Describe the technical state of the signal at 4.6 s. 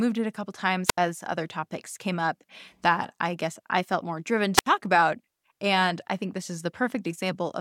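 A wireless microphone squelch dropout runs from 4.55 to 4.66 s, just after "I felt more driven": the analogue radio link fades, hiss swells briefly, and the receiver's squelch mutes the output for about 74 ms before the speech returns.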